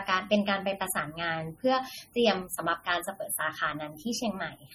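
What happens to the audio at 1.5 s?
At 1.5 s the speech sounds watery and swirly, with smeared consonant attacks and nothing above 19.6 kHz. This runs through the whole clip. It is likely heavy MP3 compression, which fits a low bitrate of around 32 kbps: starved of bits, the encoder drops weak frequency lines that flicker from frame to frame.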